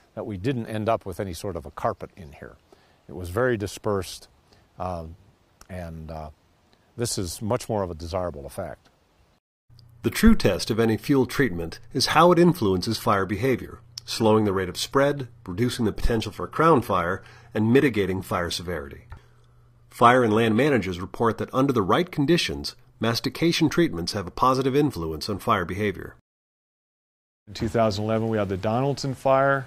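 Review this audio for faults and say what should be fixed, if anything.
From 12.90 s to 20.90 s the adaptive stream dropped to a lower bitrate rendition, probably because the connection slowed, and then switched back up. The sound changes abruptly at both points with no gap. During those 8 seconds the treble is rebuilt synthetically and codec artefacts rise. That fits a fall from AAC at around 96 kbit/s to HE-AAC at around 24 kbit/s, where the highs are recreated from a low-rate core. To prevent it, give the player a larger buffer and a higher minimum bitrate so short slowdowns don't force a downswitch.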